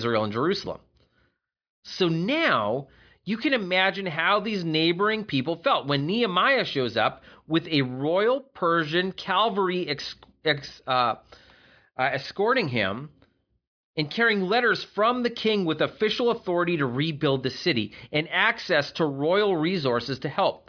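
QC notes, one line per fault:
No faults found in this speech clip. Nothing audible calls for a note at any point.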